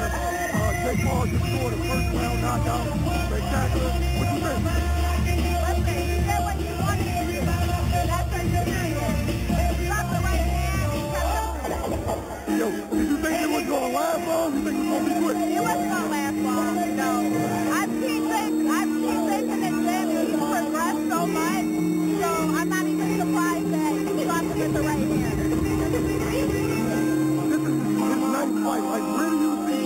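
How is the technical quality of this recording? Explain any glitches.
A bright, metallic fizz runs through the whole recording, rising and falling with the level of the sound and sitting about 18 dB below it. This is imaging from sample-and-hold upsampling. The audio points to a source at 8 kHz raised to 48 kHz by holding each sample with no smoothing filter. That leaves mirrored copies of the spectrum, the lowest in the 4 to 8 kHz band, where its components move opposite to the pitch.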